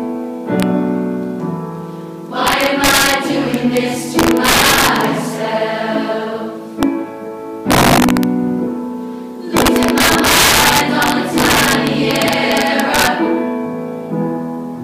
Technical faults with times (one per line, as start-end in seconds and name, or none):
0.60-0.63 integer overflow
2.47-3.14 integer overflow
3.54-3.77 integer overflow
4.19-5.04 integer overflow
6.83 integer overflow
7.71-8.23 integer overflow
9.57-13.07 integer overflow